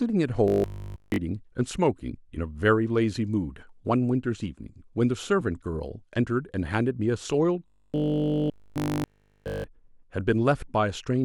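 Speech that twice collapses into a rigid, metallic 50 Hz buzz, from 0.48 to 1.18 s and from 7.68 to 9.64 s: robotic sound from repeated short buffers, likely essentially all of it a single chunk of about 20 ms replayed over and over.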